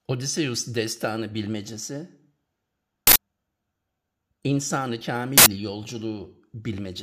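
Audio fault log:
3.07–3.16 s and 5.38–5.46 s, uninitialised buffer: two harsh bursts of digital noise, each about 85 ms long. An audio block was played before anything was written into it, so leftover memory came out as samples. The length fits a 4096-sample buffer.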